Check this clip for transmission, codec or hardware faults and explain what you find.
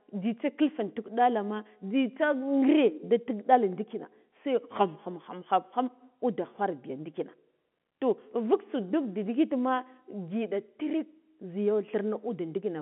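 No faults turn up anywhere in the speech. It sits in a telephone band of about 150 Hz to 3.4 kHz, which fits ordinary G.711 mu-law telephone coding at 64 kbps, with its quantisation noise faint at most.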